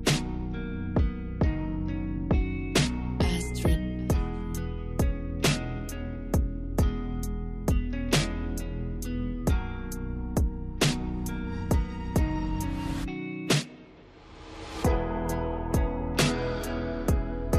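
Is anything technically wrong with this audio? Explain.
No, nothing here sounds technically off, and it comes across just fine from beginning to end.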